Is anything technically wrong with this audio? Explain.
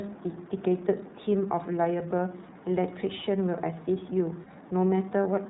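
Yes. Two related faults are audible in this speech clip.

The whole clip has the sound of the iLBC codec. The audio is narrowband, with nothing above 4 kHz, which gives it a telephone-like dullness. iLBC codes each frame's excitation independently rather than predicting from the previous frame. The damage is plainly audible as a rough, slightly synthetic texture on the speech. The character fits iLBC's 13.33 kbps mode with 30 ms frames.

From 4.44 to 4.48 s there is a lost iLBC frame, and the gap points to about 30 ms of missing audio, consistent with a single dropped packet. The decoder fills the hole by repeating the last pitch cycle with added noise, so the gap sounds like a brief held, slightly buzzy vowel. Because iLBC frames are self-contained, clean decoding resumes almost immediately after the gap.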